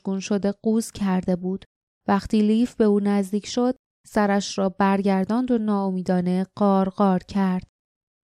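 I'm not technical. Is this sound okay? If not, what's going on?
Yes, it's fine: nothing goes wrong anywhere in the recording, so you can relax about it.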